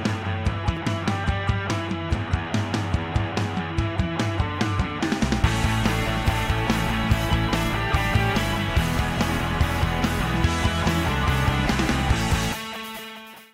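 No technical faults can be heard anywhere in the audio. Nothing in it calls for a timestamp or a note of any kind.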